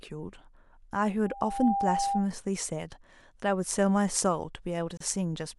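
From 1.24 s to 2.33 s a loudspeaker feedback squeal rises out of the speech: a single steady tone at 798 Hz that swells over roughly half a second until it sits at about the same level as the voice. The microphone is hearing its own loudspeaker, and at that one frequency the loop gain tops unity, so the tone feeds itself. Its fixed pitch and gradual build separate it from a hum or a whistle already present in the recording.

At 4.97 s to 5.00 s a gap at a join of encoded pieces cuts a 32 ms hole into the continuous speech. Two separately encoded segments were butted together with the encoder's start-up delay and final-frame padding left in, so silence opens with smeared edges and the sound resumes exactly where it broke off. Unlike a dropout from lost data, nothing is skipped or repeated around it.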